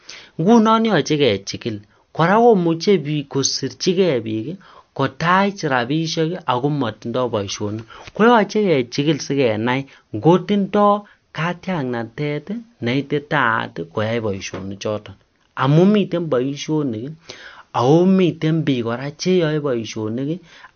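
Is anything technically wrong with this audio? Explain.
Yes, there's MP3 compression throughout the speech: nothing above 6.5 kHz, plus a watery, swirly texture from weak frequency lines flickering, likely a starved bitrate around 48 kbps.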